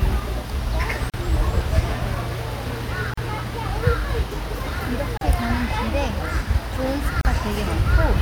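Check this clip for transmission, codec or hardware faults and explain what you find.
One fault recurs: a gap at a join of encoded pieces, at 1.10, 3.14, 5.17 and 7.21 s, each silence about 38 ms with smeared edges, from encoder delay and end-padding left in.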